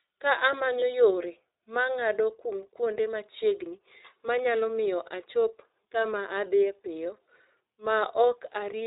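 Across the whole recording the speech sounds muffled and boxed in, with nothing above 4 kHz and a slightly rough, synthetic edge that is plainly audible. That is the iLBC codec at work. This narrowband VoIP coder squeezes each short frame on its own, and the character here fits its 20 ms mode at about 15.2 kbps. At that rate the fine detail of the excitation is coarsely modelled, leaving the buzzy, processed texture.

From 0.80 to 0.83 s a brief held, faintly buzzy sound replaces the speech before normal audio returns immediately. This is a lost iLBC frame, and the gap's length fits a single missing 20 ms frame. With the packet gone, the decoder filled the hole by repeating the last pitch cycle blended with noise. Since each iLBC frame decodes independently, the next frame arrives clean, so the repair is short-lived.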